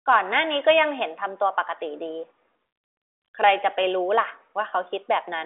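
The speech here carries no technical fault, and what can be heard of the G.726 ADPCM path at 40 kbit/s is the expected telephone band of about 300 Hz to 3.5 kHz, with nothing above 3.8 kHz and the coding noise faint at most.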